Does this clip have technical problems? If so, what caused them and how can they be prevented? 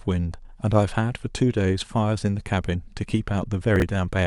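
Yes. At 3.76 to 3.82 s the speech jumbles briefly. Chunks are out of order: a 20 ms chunk plays two chunks late, creating three hard joins. Sequence-numbered buffering prevents this.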